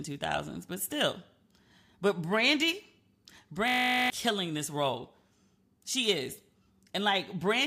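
A speech clip with a steady 50 Hz buzz from 3.68 to 4.1 s, just before "killing this role". The buzz is a system hang loop: the system froze while the sound hardware kept replaying one 20 ms stretch of its ring buffer about twenty times, which fits a 20 ms buffer, and roughly 0.4 s of speech is lost.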